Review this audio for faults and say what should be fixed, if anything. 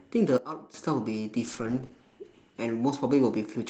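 At 0.38 s the speech and its background noise drop together by about 12 dB in one step, then snap back at 0.74 s. That's a sudden gain jump, likely a gain setting applied instantly with no ramp between samples. Ramping gain changes over a few milliseconds would fix it.

From 1.5 s to about 2.65 s there's a call bitrate drop: the speech goes rough and muffled as the encoder falls from 32 kbps to 11 kbps, staying at the low end for about 1.1 s, and bandwidth shrinks from 20 kHz to 8 kHz. Smoothing the bandwidth estimate and setting a higher bitrate floor would keep this from happening.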